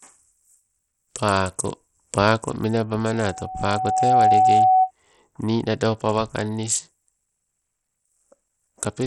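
A speech recording that carries heavy coding damage from start to finish: the top end stops dead at about 16.5 kHz, the upper registers flicker in and out, and a gritty, grainy texture sits over everything. That combination is likely Bluetooth SBC compression at a starved bit pool, which fits a rate near 64 kbps. What separates it from an MP3 or AAC encoder at a similar rate is the coarse, evenly spread grit and aliasing rather than swirly, watery artefacts, since SBC splits the sound into a handful of wide bands with no hearing model to hide its errors. On top of that, a loudspeaker feedback squeal appears from 3.13 s to 4.91 s, ending just before "nii nado pawa kangniss". A single tone at 749 Hz swells over roughly a second until it stands about 10 dB above the speech, because the microphone is picking up its own loudspeaker and the loop gain at that one frequency exceeds unity. Unlike a steady interfering tone or hum, it grows by itself from nothing.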